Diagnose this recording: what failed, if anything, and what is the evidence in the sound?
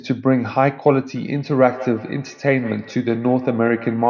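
Feedback echo between two devices, from 1.15 s to the end of the clip, at the call-processing stage. The speech comes back roughly every 150 ms, peaking about 18 dB below the direct sound. A second device in the same room is playing this call's audio, and this microphone picks it up again. The local echo canceller only removes what its own device plays, so the leaked copy passes through uncancelled.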